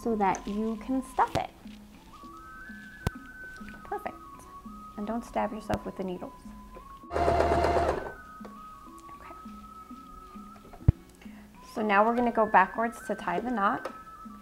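Loud pops occur at 1.35 to 1.38 s, 3.07 to 3.09 s, 5.74 to 5.76 s and 10.89 to 10.91 s. Each is a single sharp pulse about 20 dB above the sound, and the last is about 25 dB. The sound carries on underneath rather than dropping out. That sets them apart from a dropout or glitch gap. Each is likely a voltage step from a plug, switch, static or driver glitch.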